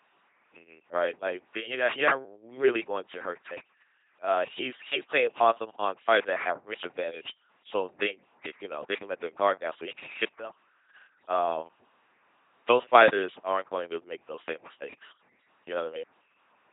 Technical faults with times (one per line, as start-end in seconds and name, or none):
0.00-16.73 LPC-10 vocoder